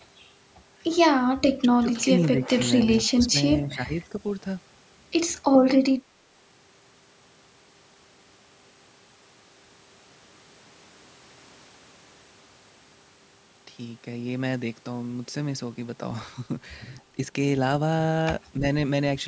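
Speech recording where the voice dips in level at 1.56–2.1 s, 2.34–2.52 s, 3.08–3.35 s, 3.65–3.94 s and briefly at 18.59–18.63 s, most likely speech suppressed in double talk by an echo canceller. The waveform shows notched envelopes, down about 15 dB at worst. The spectrogram shows faded bands, with no content above 8 kHz throughout.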